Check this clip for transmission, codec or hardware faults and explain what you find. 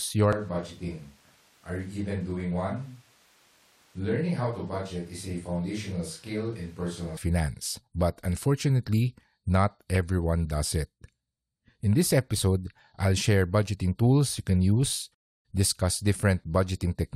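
There's one fault here: a switch to a distant microphone from 0.33 s to 7.17 s. The close mic's signal likely dropped out, leaving a farther pickup. The speech turns roomy and hollow, thinner in the bass, roughly 5 dB quieter, with background noise about 30 dB down, then snaps back close at 7.17 s.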